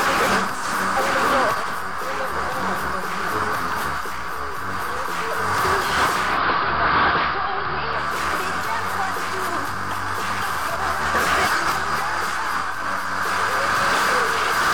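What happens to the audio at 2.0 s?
Nothing goes wrong at 2.0 s; the audio plays through that moment intact, with no dropout, click or distortion.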